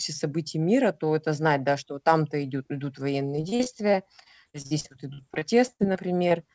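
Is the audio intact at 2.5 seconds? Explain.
Yes, the speech is intact at 2.5 seconds, with no dropout, glitch or other fault at that moment, only the usual band limit of the call codec, which leaves nothing above 8 kHz.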